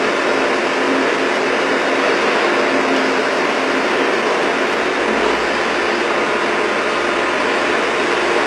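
Throughout the recording, the treble sounds rebuilt rather than captured. Nothing reaches above 12.3 kHz. The top is bright but gritty and metallic, out of step with the range below. This is likely heavy HE-AAC compression at a very low bitrate near 16 kbps, copying lower bands upward.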